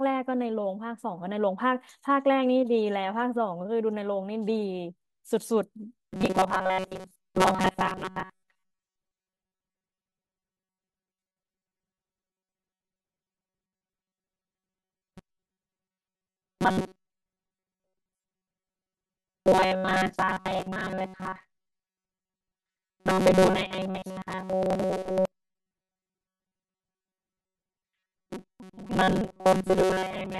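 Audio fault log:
6.08–30.40 s, robotic sound from repeated short buffers: from here on the speech goes stiff and metallic, buzzing at a fixed 188 Hz while loosely tracking the words. That's likely a ~5.3 ms chunk looping whenever fresh data runs late, so most real audio is skipped.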